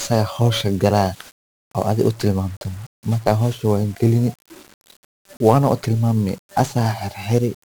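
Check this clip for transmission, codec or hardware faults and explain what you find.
The speech carries 1-bit DFPWM compression from start to finish. The codec keeps a single bit per sample. Each bit nudges an adaptive level up or down, so the waveform is only tracked roughly. The error this leaves is heavy and spread across the whole band. The speech sounds fuzzy and crackly throughout. The upper frequencies sink under a constant hiss. The damage is severe, which fits a stream of around 48 kbps.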